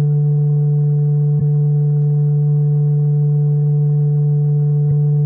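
At 1.37 to 1.42 s, and again at 4.87 to 4.92 s, the music breaks into a brief chirp, squawk, click or short hole lasting about 40 ms. Both blips come from damaged data in the compressed stream. A short run of bytes arrived wrong, so the decoder misread those frames, lost its place, and had to hunt for the next valid frame header before clean playback resumed.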